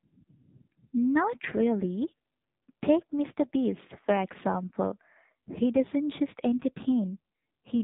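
From start to finish the speech has passed through an AMR narrowband mobile codec, the old 2G/3G phone codec. Everything above about 3.8 kHz is simply gone, so it's muffled and boxy. The codec rebuilds the voice from a vocal-tract model fed by a few pulses per short sub-frame, and here the damage is heavy: a buzzy, synthetic edge that fits one of the low modes, around 6 kbps.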